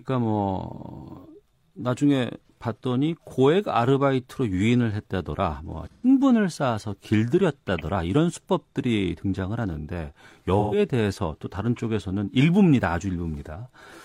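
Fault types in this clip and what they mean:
AAC frame loss with concealment: At 5.91–6.08 s and 10.59–10.78 s, the speech turns into a brief smeared, noisy or phasey patch rather than dropping out. Each gap covers 128 ms of lost audio, which points to a run of about three consecutive frames. Instead of leaving silence, the decoder rebuilt the missing stretch from the last good spectrum, scrambling signs or interpolating energy, so the gap is covered by an approximation of the sound.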